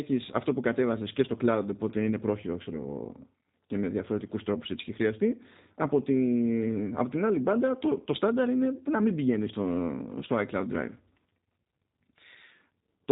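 G.729 codec damage runs throughout this speech clip: an 8 kbit/s coder rebuilds the sound from a filter, pitch predictor and sparse pulses, leaving it band-limited below 4 kHz and plainly rough and synthetic.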